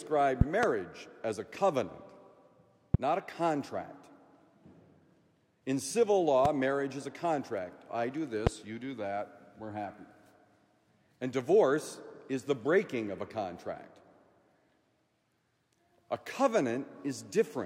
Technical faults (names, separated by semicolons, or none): loud pop